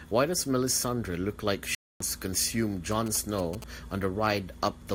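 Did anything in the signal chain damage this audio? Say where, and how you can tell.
Yes. A corrupt frame muted at the codec stage cuts the speech from 1.75 to 2.00 s, between "look like" and "to consume". The silence starts abruptly, and its length, about 0.26 s, fits roughly three frames that the decoder rejected as damaged and the player replaced with silence. Timing stays intact.

GSM signalling bursts enter through the analogue wiring from 2.92 to 3.64 s, just after "to consume". A galloping dit-dit-dit of short 217 Hz buzzes, well below the speech level, is heard. A nearby 2G phone was signalling, and the audio circuitry rectified its radio bursts.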